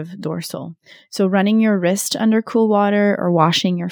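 Throughout the speech, imaging from linear upsampling dulls the top band and adds a faint metallic shimmer on sibilants, which fits a 24 kHz to 44.1 kHz conversion by straight-line interpolation. A spectrogram shows a mirrored copy between 12 kHz and 24 kHz, roughly 30 dB down.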